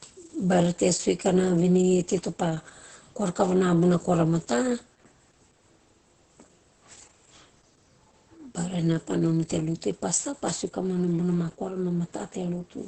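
From start to finish, the speech carries Opus voice compression damage, and it is heavy. Nothing reaches above about 8.6 kHz, so the top octave is missing and sibilants sound dull. The linear-prediction coder models each short frame coarsely, so voicing turns hoarse and slightly robotic. Fine detail in the excitation is lost. The muffled, buzzy result points to a very low bitrate, around 10 kbps, in a wideband voice mode.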